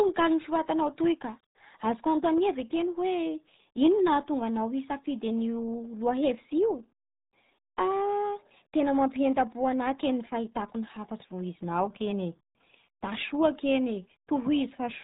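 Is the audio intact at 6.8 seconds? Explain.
No. At 6.8 seconds the speech sounds muffled and gargly, with nothing above 3.8 kHz, as throughout the clip: heavy RealAudio 14.4 codec damage, consistent with an 8 kbit/s stream.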